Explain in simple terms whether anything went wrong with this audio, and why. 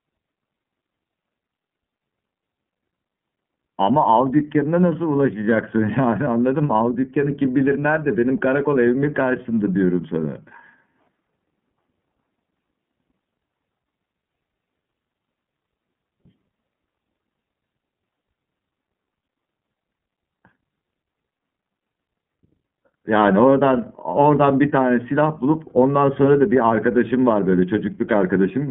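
Throughout the whole recording, the speech has passed through the iLBC codec, a telephone-style voice coder. It keeps only the band from about 150 Hz to 3.4 kHz, so the voice sounds thin and boxy, with no crisp top end. It codes the sound in 30 ms chunks, each handled on its own, and the result is a clearly audible roughness and a slightly synthetic, buzzy edge on the speech.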